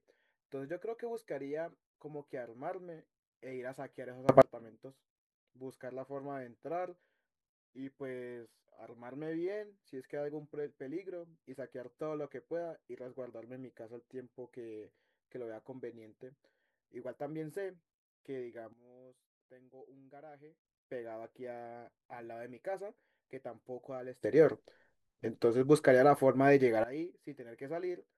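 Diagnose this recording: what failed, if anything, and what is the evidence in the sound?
A sudden gain jump occurs three times in the speech. Level leaps up by about 24 dB from 4.29 to 4.42 s, drops by about 14 dB from 18.73 to 20.65 s, and rises by about 17 dB from 24.24 to 26.84 s. Each step is instantaneous, with the background noise shifting together with the speech. The likely cause is a digital gain setting in the processing chain being applied from one sample to the next without any ramp.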